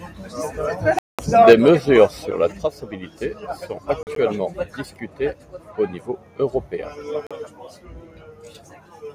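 From 0.99 to 1.19 s the speech cuts to silence for 200 ms. This is likely a Bluetooth dropout. Packets missed the headphones, and the sound resumes as if it had played on.

From 1.47 to 1.69 s, just before "sur la", peaks are harsh and crackly. This is likely microphone overload. The input runs about 5 dB past the converter's limit, and a small share of samples are flattened.

At 1.53 s the level drops suddenly by about 4 dB. This is a microphone volume step-down, likely the call software reacting to the clipping. At 2.52 s, just after "sur la", it steps down again by about 5 dB.

From 4.03 to 4.16 s, scattered gaps remove 53 ms of sound, the longest 40 ms. At 7.27 s, just after "discutées au niveau européen", a 40 ms hole follows. Both are further Bluetooth dropouts.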